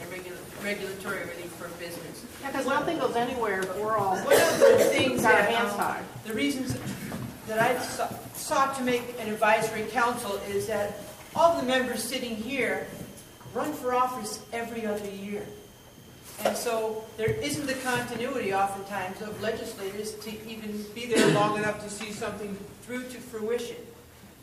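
From 21.11 to 22.85 s there's a wrong sample rate fault: the sound drags to about 0.92 speed and drops roughly 1.5 semitones, which fits 48 kHz audio played at 44.1 kHz.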